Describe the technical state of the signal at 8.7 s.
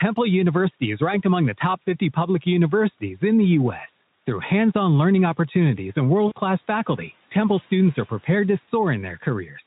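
VoIP packet loss concealed by the speech codec, from about 8.65 to 8.69 s. A 20 ms gap, which fits a single lost frame, was filled by extrapolating the last pitch and filter at falling gain, giving a brief buzzy or noisy, smeared stretch that stays weak or distorted as the following frames rebuild.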